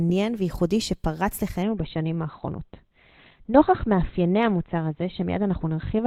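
At 1.63 s the speech shifts abruptly to an adaptive stream at a lower bitrate and stays there to the end. The player switched to a cheaper encoding without a gap. From that point the treble disappears, with nothing above 4.3 kHz, and the sound turns dull, which fits a drop from 64 to 12 kbit/s Opus. On a spectrogram the upper band ends in a sharp vertical edge at 1.63 s; the waveform stays continuous.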